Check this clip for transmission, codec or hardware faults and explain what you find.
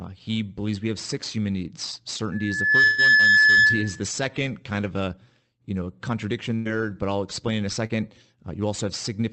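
There are three kinds of fault in this speech clip: a feedback howl, two bursts of lost packets, and one short concealed dropout.

The loudspeaker feedback squeal starts at 2.32 s, right after "have six human needs", and runs to 4.03 s. A single tone at 1.7 kHz swells up over about half a second and sits roughly 10 dB above the speech. A mic is hearing the speaker it feeds, and at that frequency the loop gain tops one, so the tone keeps feeding itself.

There's a burst of packet loss from 2.83 to 3.01 s, buried inside that squeal, and another from 6.55 to 6.69 s, between "a you know contradiction" and "but I'll explain in". In the first, 146 ms of filler covers 120 ms of missing audio. In the second, 97 ms covers 80 ms. The receiver stretches the last bit of sound into a held, fading patch, then jumps ahead with that stretch of speech gone.

The short concealed packet loss comes at 7.86–7.96 s, just after "I'll explain in a". 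About 40 ms never arrived and was patched with 36 ms of synthesized continuation. The decoder extends what came just before and blends it back into the real signal, so you get a quick smear or wobble rather than a clean gap.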